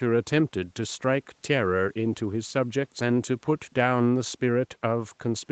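No technical faults can be heard in this recording.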